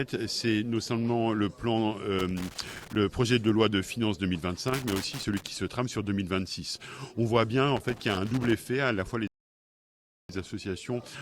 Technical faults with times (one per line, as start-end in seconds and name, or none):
2.19-2.96 loose connector crackle
4.68-5.47 loose connector crackle
7.77-8.52 loose connector crackle
9.27-10.29 rebuffering stall